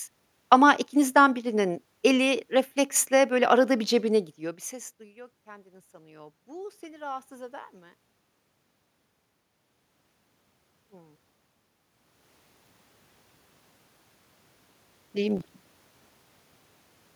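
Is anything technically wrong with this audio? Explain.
Yes, there are two. From 4.69 to 8.03 s, just after "bir cebine gidiyor bir", there's automatic gain rising. The talker moves back around 4 s and the level drops about 24 dB, so the gain control slowly pushes up about 5 dB. Voice and room noise swell together.

At 15.37 to 15.58 s there's a short burst of processor overload crackle. The processor misses its deadlines repeatedly, which fits buffers of around 5 ms, with roughly seven skipped outright. Each skip leaves a hard-edged gap, and together they make a gritty tear.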